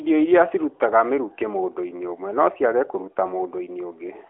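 The clip is speech, and nothing is technically wrong with it.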